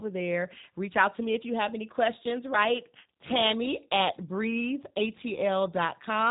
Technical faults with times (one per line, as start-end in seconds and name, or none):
0.00-6.30 G.729 codec